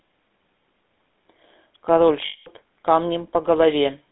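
GSM full-rate codec, across the whole of this short speech clip: the vocal tract is modelled and driven by a sparse, regularly spaced pulse excitation, giving plainly audible buzzy, gravelly roughness, with the line limited to roughly 200 Hz to 3.6 kHz, consistent with the 13 kbps full-rate coder. Lost GSM frames, from 2.26 to 2.48 s: for about 200 ms the decoder keeps reusing the last good frame's settings, so the sound smears into a rough metallic ring, which fits about ten missing 20 ms frames.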